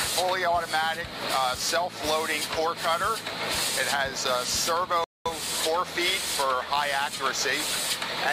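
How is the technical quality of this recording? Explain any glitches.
There's one glitch worth flagging: a rebuffering stall from 5.04 to 5.26 s. The audio drops to dead silence for about 215 ms, then picks up exactly where it left off, with nothing skipped. That's the player running dry on downloaded data and simply waiting for more to arrive before carrying on. So no content goes missing, but the timeline gets stretched by that gap, which you hear as an abrupt pause mid-flow.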